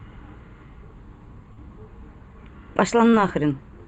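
From start to finish the speech carries channel delay (comb filtering): one channel trails the other by only a few samples, roughly a tenth of a millisecond, and the mono sum cancels the shared content at evenly spaced notches, the first near 5 kHz. The result is a fixed hollow, slightly dull tint that never sweeps, unlike a flanger.

At 1.53 to 1.59 s and again at 3.11 to 3.15 s there is short concealed packet loss. A few hundredths of a second never arrived, and the decoder stretched the preceding sound across the hole before blending back. The result is a brief smeared wobble rather than the clean silence of a plain dropout.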